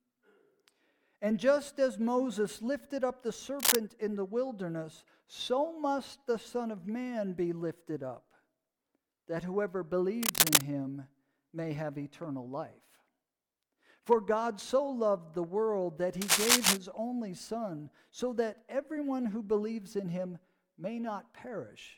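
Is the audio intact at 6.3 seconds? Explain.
Yes, the audio is intact at 6.3 seconds, with no dropout, click, distortion or other fault at that moment.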